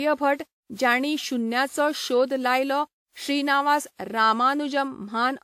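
Throughout, the speech sounds swirly, smeared and hollow, with blurred attacks and nothing above 17.8 kHz. This is likely generation loss from roughly five lossy encodes, worse than one encode would cause.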